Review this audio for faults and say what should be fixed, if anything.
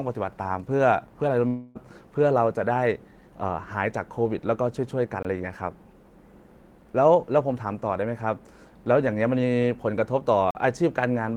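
A long network dropout runs from 1.47 to 1.77 s in this speech. About 280 ms of audio never arrives. The receiver fills nearly all of that gap, some 276 ms, by extending the last sound as a fading buzz. There is no hard silence, only that smeared tail, and then the speech resumes with the lost part missing. The likely cause is lost packets on the network path. Adding jitter buffering and packet loss recovery such as FEC or retransmission would prevent it.

There are two blocks of digital silence. The first runs from 5.23 to 5.25 s and lasts about 21 ms. The second runs from 10.51 to 10.55 s and lasts about 43 ms. In each, the sound cuts out abruptly and returns with no fade. The lengths fit 1024-sample and 2048-sample buffers at 48 kHz, which points to output buffers that were not filled in time. A larger buffer or a faster audio processing thread would prevent these underruns.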